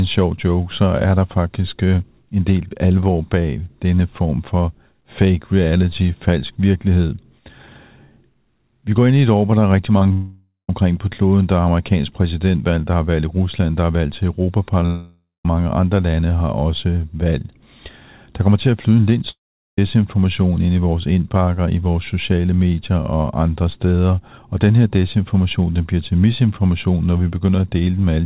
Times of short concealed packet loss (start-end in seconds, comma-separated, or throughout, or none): 9.98-10.11, 14.80-14.85